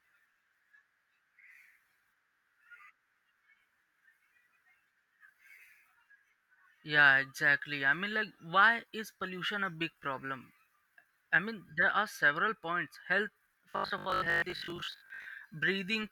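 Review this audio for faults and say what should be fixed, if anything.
From 13.70 to 15.26 s a rigid, metallic 50 Hz buzz sets in: robotic sound from repeated short buffers, likely 20 ms chunks looped in place of most real audio. Give the stream enough buffering or a proper concealment method, so late audio never forces the same short chunk to repeat.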